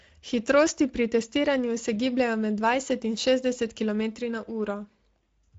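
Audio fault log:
Throughout, Speex codec: the speech has passed through a low-rate CELP speech coder whose plainly audible damage fits a setting around 17 kbps, too few bits to describe the excitation faithfully. The model rebuilds each stretch of speech from a coarse pulse-and-filter approximation, so the voice comes out hoarse, grainy and noisy. The band is also cut off, with nothing above 7.7 kHz, which takes the air and crispness off consonants.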